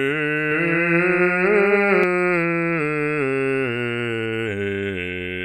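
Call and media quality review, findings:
Doubled audio track, 0.52 to 2.04 s. Music heard twice: a second full-band copy trails by about a fifth of a second, a few dB below the original. Likely a second capture path running slower, or an edit layering two out-of-step copies. Unlike acoustic echo or reverb, the copy has no decay tail, no room colouring and no repeated fading taps. It switches on and off abruptly at both boundaries.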